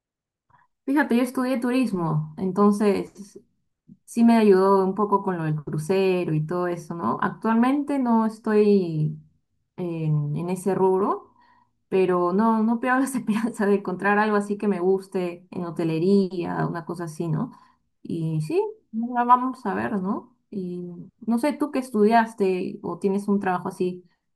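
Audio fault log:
No faults can be heard anywhere in this speech recording. There is nothing here that calls for an entry in the log.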